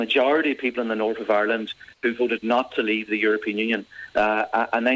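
The audio has come through a call path, and with nothing above 8 kHz it sounds like a wideband codec along the lines of G.722 at 64 kbps. The problem sits between 1.94 and 2.03 s. For about 90 ms the real background, already about 37 dB under the loud parts, turns into a flat, featureless hiss roughly 8 dB quieter. That's most likely comfort noise in place of the background: the sender's voice detector judged the gap silent and stopped transmitting, and the receiver filled the hole with synthetic noise.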